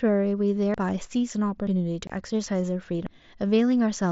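At 0.74 s and 1.67 s the speech jumps ahead. Roughly a tenth of a second goes missing each time. At 3.07 s a bigger jump skips about a third of a second. No silence is left behind, only an abrupt join. The likely cause is a dropped buffer (overrun): the hardware overwrote samples before the program read them.

From 2.07 to 2.10 s, a 22.5 ms hole opens with sharp edges. This is unconcealed Bluetooth headset packet loss. The gap fits about three lost voice frames on the mSBC headset link. Silence or an idle pattern filled them instead of anything smoothed over.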